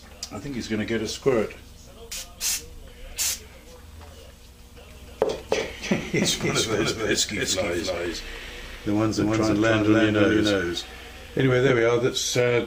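From 4.90 to 11.70 s a doubled audio track appears: an equally loud, full-band copy trails about 300 ms behind, likely from a second capture path, showing as duplicated waveform shapes.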